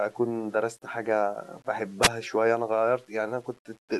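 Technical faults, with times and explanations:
Throughout: low bit depth without dither. The signal was likely rounded to very few levels, consistent with 8 bits, with no dither, so the error tracks the speech. Quiet passages turn grainy and gritty, the distortion shifting with the sound, sitting roughly 35 dB below it.
2.01–2.09 s: wireless microphone noise hit. The radio link briefly faded as reflections cancelled, letting receiver noise surge for about 74 ms. This is heard as a short swish of static before the signal recovers.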